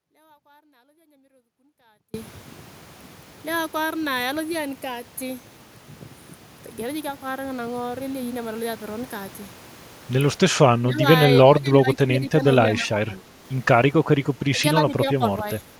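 The signal path likely lost the wanted speech while staying live, so the clip opens mid-dropout. From the start to 2.14 s there is an audio dropout to a faint residue: only faint sound, roughly 35 dB down, until the speech returns abruptly.

Later, an echo canceller likely mistook the talker for loudspeaker echo while both sides spoke, producing speech suppressed in double talk. The speech dips by around 10 to 15 dB at 10.78 to 11.04 s, 11.39 to 12.43 s, 12.68 to 13.44 s, 14.51 to 14.63 s and 14.80 to 15.23 s.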